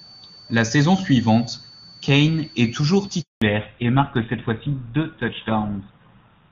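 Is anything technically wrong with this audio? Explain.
Yes, there are three faults.

A switching supply whistle runs throughout. A power supply's switching drifts into the audible range. It sounds as a faint high tone wandering between 4.48 and 4.53 kHz, about 25 dB below the speech.

A handover gap runs from 3.22 to 3.42 s, right after "est toujours". The call moved between networks and no frames arrived. The speech dies away quickly and is silent for 200 ms.

A fallback to narrowband begins at 3.42 s and lasts to the end. Before it, the sound is clear, fitting high-rate HD Voice. Afterwards, nothing above 4 kHz remains, which fits an older codec such as GSM full rate. The voice turns dull and rougher.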